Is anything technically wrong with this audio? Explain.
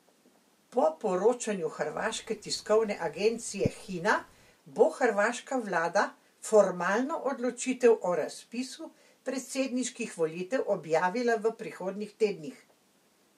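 No, nothing is technically wrong with this audio. The speech comes through with no technical fault to point to.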